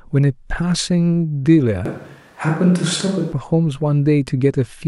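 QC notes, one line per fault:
1.86–3.32 s, switch to a distant microphone: speech abruptly turns hollow, roomy and bass-light at unchanged level, likely a farther mic; the hard cut back separates it from added reverb.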